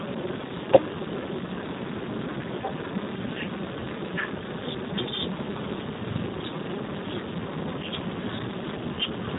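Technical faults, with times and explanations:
Throughout, Speex codec: heavy CELP damage leaves the speech hoarse with nothing above 3.8 kHz, which fits a very low setting near 4 kbps.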